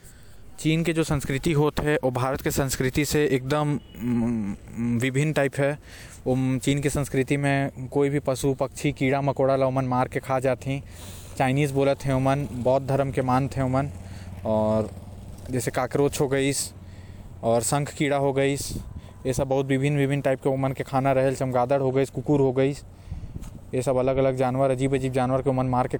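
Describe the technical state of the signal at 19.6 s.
At 19.6 s the speech signal is intact, with no audible dropout, distortion, noise burst or other fault.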